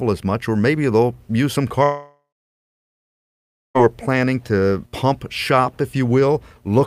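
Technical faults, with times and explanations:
1.83–3.77 s long network dropout: a brief fading buzz, then about 1.5 s of silence, likely from lost network audio, so nearly 2 s never returns.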